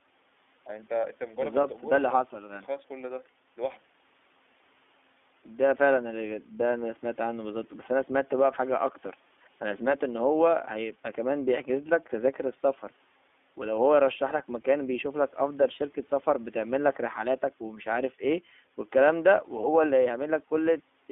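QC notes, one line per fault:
Throughout: iLBC codec. The speech is confined to 250 Hz to 3.5 kHz, with nothing above, and each 20 ms frame's excitation is coded independently, leaving a plainly audible rough, synthetic edge that fits a rate of about 15.2 kbps.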